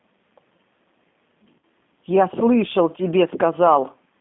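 From the start, the speech carries G.729 codec damage, and it is plainly audible. The line band runs from about 200 Hz to 3.5 kHz. Everything above is gone, so the sound is dull and boxy. The codec rebuilds speech from a filter, a pitch predictor and a few pulses per frame. That leaves a rough, slightly synthetic edge on every syllable. The character points to the 8 kbit/s G.729A variant.

At 1.59 to 1.62 s, VoIP packet loss concealed by the speech codec breaks in. About 40 ms of audio went missing, which fits two lost packets. The decoder filled the gap by repeating its last pitch and filter settings. Their level drops frame by frame. The result is a short buzzy or noisy smear that fades rather than a clean gap. Speech right after stays weak or distorted for tens of milliseconds while the decoder recovers.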